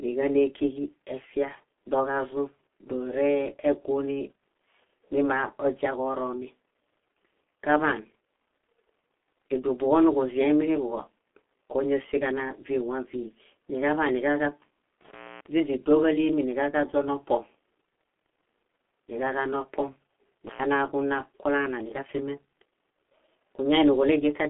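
From start to finish the speech carries G.723.1 codec damage. Its muffled, hoarse quality and smeared consonants point to a very low bitrate near 6.3 kbit/s. On a spectrogram, energy stops abruptly at 3.7 kHz, and harmonics look blocky, updating in coarse steps.

An intermittent contact opens from 15.07 to 15.47 s, with the signal dropping out for about 271 ms, and again from 20.47 to 20.61 s for about 100 ms. Crackle marks each break's edges. The waveform shows spiky clicks bracketing a near-flat stretch of faint hiss.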